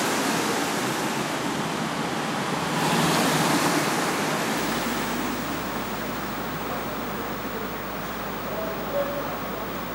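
At 4.57 s a video or display buzz begins and runs to the end of the clip. A screen or video cable is coupling into the audio path. The result is a harsh 50 Hz buzz, locked to the picture's field rate, with gritty hash layered above it. A thin, very high whine also sits near 15.6 kHz, from the line scan. The interference is fairly strong, roughly 15 dB below the wanted sound.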